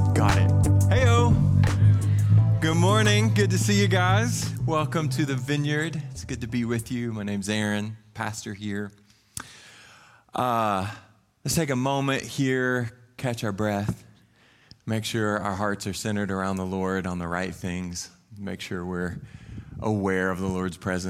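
No technical faults can be heard anywhere in the clip. Nothing in the audio points to a problem in how it was captured, processed or delivered.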